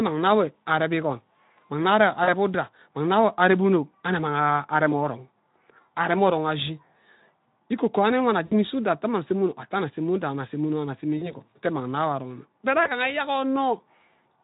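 Speech, carried over a Speex-coded link whose coding damage is light. VoIP packet loss concealed by the speech codec breaks in four times: 2.23 to 2.29 s, 8.45 to 8.53 s, 11.17 to 11.33 s and 12.83 to 12.90 s. The gaps sound like about 40, 60, 40 and 20 ms of missing audio. The decoder repeats its last pitch and filter state at falling gain. The result is a brief buzzy or noisy smear that fades, and the sound stays thin just after each gap.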